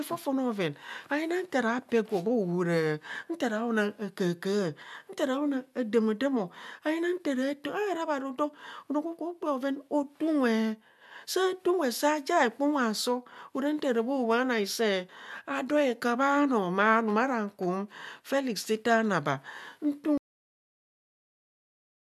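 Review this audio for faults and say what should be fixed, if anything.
At 20.18 s the speech stops dead in the middle of a sound and drops straight to digital silence, with no natural decay, for the last 1.9 s of the clip. This is a cut-off end: the final buffers of audio were never written to the file, so the recording ends on whatever sample the last complete buffer happened to hold. To prevent it, flush and close the recording stream fully before finalising the file.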